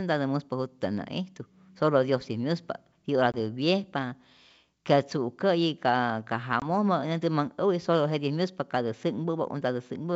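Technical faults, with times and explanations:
3.32–3.35 s and 6.60–6.66 s (the second just after "ka ka"), packet loss on an ADPCM call: each time the speech drops into a short, hard-edged silent gap, then comes back with brief, slight distortion before settling. About 20 ms of audio is missing at each point, roughly one packet. The receiving decoder's adaptive predictor and step size lose track of the sender's, so the sound after each gap is slightly distorted until they realign.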